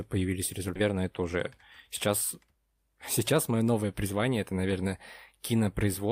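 Around 0.75 to 0.77 s there's a skip ahead: about a second of speech got dropped and playback jumps straight on, with no gap filling the join. Right after, from 0.81 to 1.59 s, the jitter buffer speed-up kicks in at 118%, trimming pitch periods so it sounds hurried without any pitch change. It happens again at 107% from 2.08 to 4.87 s and from 5.35 to 5.85 s.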